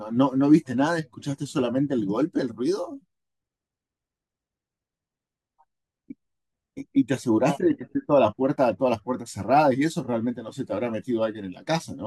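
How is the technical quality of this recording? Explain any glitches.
The recording has one glitch, a stretch of crude rate conversion from 7.95 to 10.33 s. Here the sample rate was raised by a ratio of 1.5 by simply repeating the nearest sample, with no filtering; the pattern fits a 32 kHz to 48 kHz conversion. The stair-stepped waveform adds an error about 30 dB below the speech, at tones unrelated to it, heard as a gritty, inharmonic fizz that follows the louder and brighter sounds.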